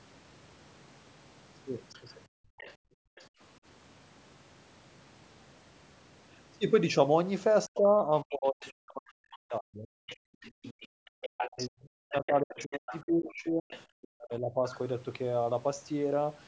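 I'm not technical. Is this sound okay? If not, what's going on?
No. Three call-related problems can be heard.

Other side's voice leaking through: a second, fainter voice appears at 1.93 s, 2.58 to 3.25 s, 7.74 s, 8.43 to 8.7 s, 10.07 to 13.81 s and 14.7 s. This is likely the far caller's audio from the loudspeaker reaching the microphone because the echo canceller missed it.

Background gated by the echo canceller: between 2.28 and 3.4 s, the room sound drops out for roughly 0.7 s in total, almost to silence, and then returns. The canceller turned the microphone right down while the loudspeaker was playing.

Speech suppressed in double talk: from 7.68 to 14.56 s, the main talker's voice dips deeply or cuts out in pieces, for about 5 s altogether. Both sides were likely talking, so the canceller turned down the talker along with the echo.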